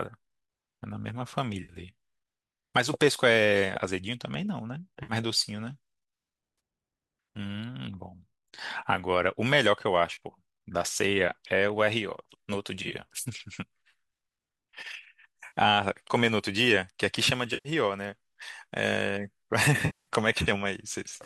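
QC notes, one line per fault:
1.63–1.73 s, 5.03–5.13 s, 6.58–6.60 s, 10.14–10.18 s, 12.83–12.92 s (broken into brief scattered gaps), 15.47–15.58 s, 17.54–17.69 s, 19.86–20.09 s, AAC frame loss with concealment: short smeared, phasey patches that grow longer toward the end. The decoder is rebuilding missing stretches of roughly 10 ms frames from the last good spectrum. That lasts 20 to 210 ms here, over a faint graininess likely from low-delay AAC.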